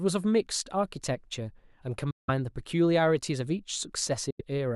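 At 2.11 s the speech cuts to silence and returns at 2.30 s; a shorter gap follows from 4.30 to 4.41 s. In both cases the sound resumes further along rather than where it stopped, as though it had kept playing through the hole. That pattern of packets arriving too late and being discarded is likely a Bluetooth dropout on the wireless link to the headphones.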